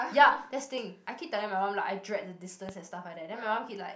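A speech recording with a single loud pop at 2.69 to 2.71 s: one sharp, brief thump that stands roughly 10 dB above the surrounding level while the speech carries on beneath it. The likely cause is a sudden voltage step or pulse entering the chain, such as from a plug, a switch, a static discharge or a driver glitch, which the following circuitry shaped into this short burst.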